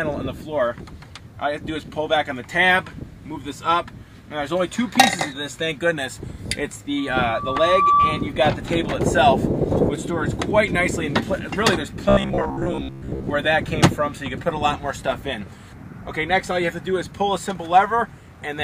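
At 6.97 s a microphone starts picking up the loudspeaker it drives, and the loop gain at 1.2 kHz rises above one, producing loudspeaker feedback squeal. That single frequency keeps reinforcing itself, swelling over roughly a second into a piercing tone that ends up about 5 dB louder than the sound it rides on. The squeal dominates the audio until 8.33 s, when the tone stops.

From 12.09 s to 13.28 s the audio takes on a rigid, metallic quality with a steady 66.7 Hz buzz, the robotic sound from repeated short buffers. The likely cause is audio arriving too slowly, so the system keeps replaying its last fragment instead of new material, with most of the real audio in that stretch skipped. Replaying a 15 ms fragment over and over stamps that fixed buzz pitch onto the sound, which still loosely follows its original shape.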